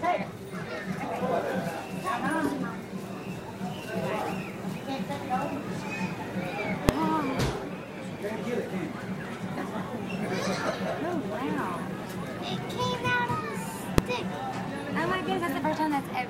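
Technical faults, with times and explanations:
6.89 s and 13.98 s, invalid numbers at full scale: a calculation produced infinite or invalid values, which became one extreme value far beyond the audio's peaks for 1.33 ms each, which fits a 64-sample block. So brief a stretch sounds as one sharp bang.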